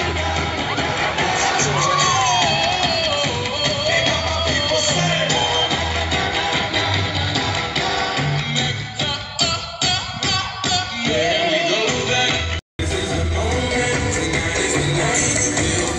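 An input switched to a poorer device runs from 0.0 to 12.79 s. Through that stretch the sound is band-limited, with nothing above 7.6 kHz, so it comes across dull and boxy, carrying a faint added noise floor well below the signal. At 12.79 s a silence of about 200 ms marks the changeover, and the fuller top end returns at a similar level. The likely cause is the system capturing from a lesser microphone or headset profile before switching.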